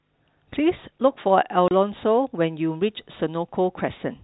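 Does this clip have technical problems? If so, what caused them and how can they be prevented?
Yes, there's one: packet loss filled with silence. From 1.68 to 1.71 s the speech drops out completely for 30 ms, a hole that points to a single lost packet. The receiver simply played nothing in its place, so the gap has hard edges. The telephone-band G.711 coding underneath just keeps everything below 4 kHz. To prevent it, use a jitter buffer with packet loss concealment so lost frames get interpolated instead of silenced.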